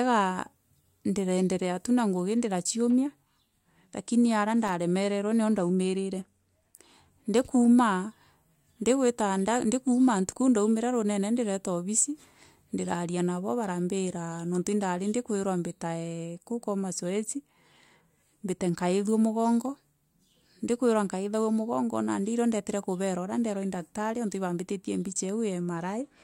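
Speech, with one burst of loose connector crackle from 4.67 to 4.73 s, between "lakini aria" and "nio ndaumirire". A worn contact making and breaking chops the signal into scratchy noise.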